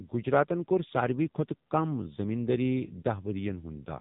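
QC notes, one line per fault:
Throughout, AMR narrowband mobile codec: the speech passed through a narrowband mobile speech coder that rebuilds each 20 ms frame from a vocal-tract model excited by only a handful of pulses, and nothing survives above 3.8 kHz. The damage is heavy, with a buzzy, synthetic edge and a dull, boxed-in top end. That coarseness points to one of the low-rate modes, around 6.7 kbps.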